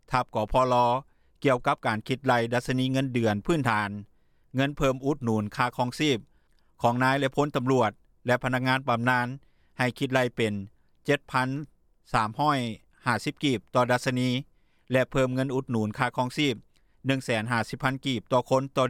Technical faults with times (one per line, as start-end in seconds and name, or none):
4.71-8.83 resampler restarted on every block